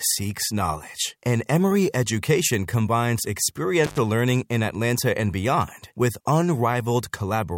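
An intermittent contact at 3.84 to 3.98 s: a loose connection briefly opens, cutting the sound for about 92 ms with crackle at both edges.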